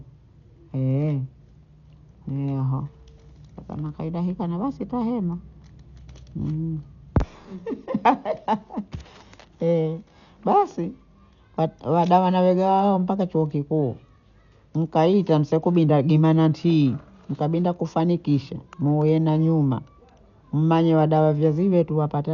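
From start to finish the speech sounds dull, with nothing above 7 kHz and a rough, fluttering noise clinging to tones. That's likely heavy Dolby Digital compression at a starved bitrate, around 48 kbps, where frequency lines given no bits get filled with dither noise.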